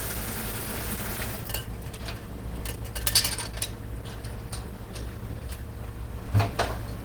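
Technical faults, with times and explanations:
Throughout: Opus compression, plainly audible. The sound is grainy, hoarse and rough, consistent with a hybrid-mode encode, likely at a low rate around 16 kbps, despite content reaching about 20.2 kHz.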